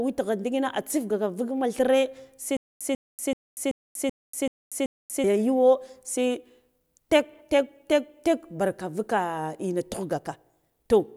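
From 2.57 s to 5.24 s the speech hits a stutter with silent gaps: a 143 ms burst repeats seven times, each followed by about 239 ms of dead silence, a steady 382 ms cycle. Likely a stalled stream replaying its last fragment on each retry.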